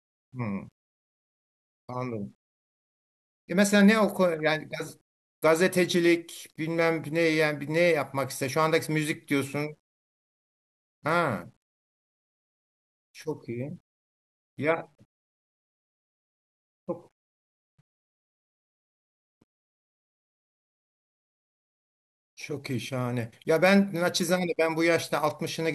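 Right from the start and all the way through, the speech has a grainy, gritty edge that rides along with the voice, rougher on quiet syllables and as phrases tail off. That's low bit depth without dither: the likely cause is the signal being rounded to something like 10 bits with no dither, so the error tracks the waveform instead of sitting as steady hiss, landing roughly 50 dB under the speech.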